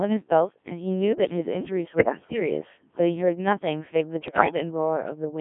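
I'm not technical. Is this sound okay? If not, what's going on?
No. The whole clip has gone through a Codec 2 vocoder, which rebuilds the voice from a rough outline, so it sounds robotic and buzzy throughout. There are also bit errors on digital voice radio from about 1.96 to 2.40 s and 4.28 to 4.55 s, where scrambled data makes the voice warble and jump into garbled bleeps.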